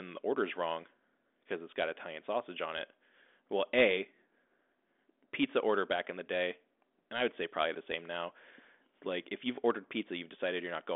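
Listening through this speech clip, nothing stood out as a technical problem.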